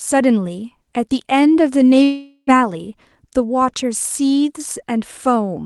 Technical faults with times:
2.03-2.50 long network dropout

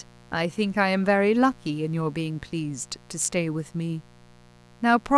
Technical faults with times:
0.00-5.18 mains buzz

